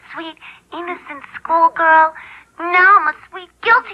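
A short audio clip with frames out of order from 3.06 to 3.12 s: two adjacent 30 ms blocks swap places, giving a brief garbled flutter.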